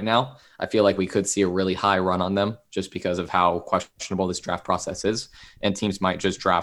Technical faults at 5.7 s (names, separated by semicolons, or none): none